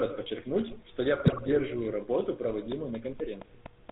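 A speech clip carried throughout by the GSM full-rate codec, with damage that is plainly audible. Everything above 4 kHz is missing, and the voice has the buzzy, gravelly grain of a coder that rebuilds speech from a vocal-tract filter driven by a sparse, regularly spaced pulse excitation. The quality fits a 13 kbps full-rate stream. Unlike plain band-limiting or a muffled microphone, the roughness sits inside the voice itself and is steady from start to end. From 1.2 to 1.59 s, right after "подчеркнуть что я", GSM bit errors break through. Corrupted filter, pitch and gain parameters reach the decoder, so successive frames squawk, pop and gargle, with the spectrum lurching and the level jumping. This is different from packet loss or dropouts, which leave gaps or smeared repeats. Here the sound stays continuous but is rebuilt wrongly, and the damage sounds dense, as from a fairly high error rate across most of that stretch.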